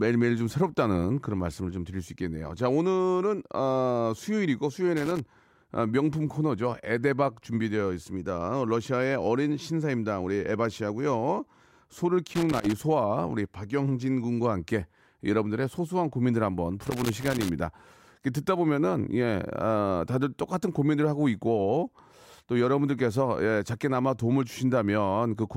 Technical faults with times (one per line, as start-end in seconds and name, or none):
4.97-5.20 loose connector crackle
12.27-12.73 loose connector crackle
16.86-17.49 loose connector crackle